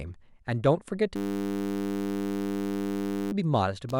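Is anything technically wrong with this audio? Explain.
Yes. From 1.16 to 3.32 s the speech freezes into a steady, flat buzz pitched at 100 Hz. This is a system hang loop: the computer stalled while the audio hardware kept replaying one 10 ms stretch, which fits a 10 ms buffer, over two hundred times.

From 3.89 s to the end, a chirping, pulsing buzz at around 70 Hz appears, roughly 15 dB below the speech. This is computer activity noise: processor or graphics load shifting the shared ground, so the buzz follows the machine's activity rather than the sound.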